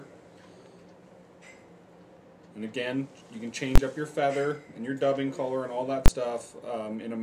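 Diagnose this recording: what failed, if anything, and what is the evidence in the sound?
The fault is invalid numbers at full scale, arising in processing where a calculation produced infinite or invalid values that sample-format conversion then forced to the extreme value. Two bangs mark it, at 3.755–3.776 s and 6.059–6.080 s, each about 21.3 ms long, which fits a 1024-sample block. The output is pinned flat at one extreme for the block rather than dropping to silence, as a dropout would, and the block is too short to hear separate edge pops.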